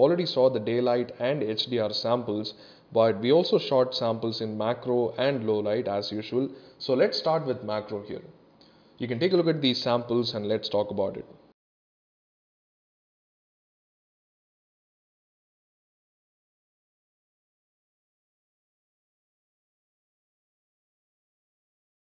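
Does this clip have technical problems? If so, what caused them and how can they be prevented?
No, nothing in the signal points to a technical fault, so there is nothing here that needs a cause traced or a fix.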